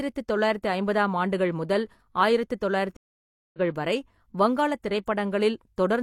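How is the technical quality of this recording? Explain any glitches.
There's one real glitch, a stream reconnect. From 2.97 to 3.59 s the speech drops out for about 0.57 s, then picks up roughly 0.7 s further along, so a bit of speech is skipped. The connection broke and the player restarted decoding mid-stream, jumping ahead.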